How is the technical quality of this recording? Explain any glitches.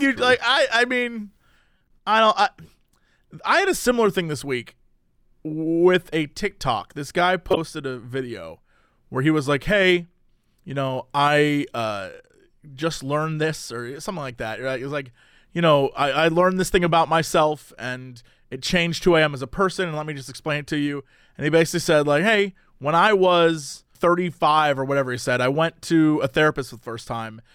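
The speech has three brief glitches, all corrupt frames decoded. Damaged compressed frames were played anyway. Misread data put energy at wrong frequencies. At 1.78 to 1.91 s, after "like I I mean", several frames give a faint blip. At 7.50 to 7.57 s, before "a video where he", a loud chirp peaks near -5 dBFS. At 23.70 to 23.73 s, after "like hey when I", a moderate squeak.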